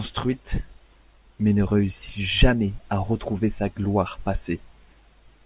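Speech recording; no technical faults detected anywhere in the clip.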